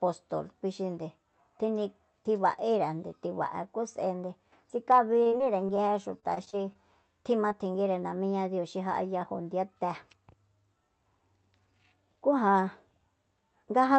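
From 5.13 to 5.79 s and again from 6.19 to 6.77 s the speech turns choppy and robotic. This is repeated packet loss, with a run of gaps each patched by extending the previous sound. At 7.49 to 7.52 s a brief smear is audible, a short concealed packet loss where roughly 20 ms went missing and was filled in before blending back.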